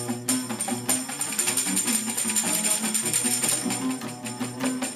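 No faults turn up anywhere in the recording: no dropouts, clicks, distortion or timing breaks.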